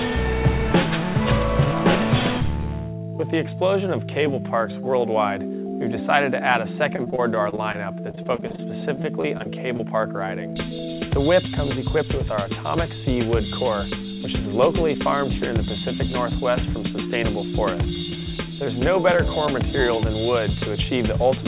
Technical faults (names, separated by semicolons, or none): repeated packet loss (robotic sound); jitter buffer speed-up